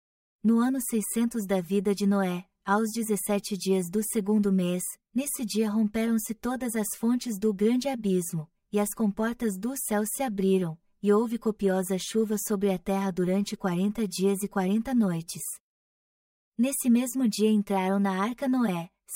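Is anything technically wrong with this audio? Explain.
Yes. Channel delay (comb filtering) runs through the whole speech clip. One channel arrives roughly 5 ms late, and summing to mono cancels energy in evenly spaced notches starting around 100 Hz, giving the voice a hollow, phasey coloration.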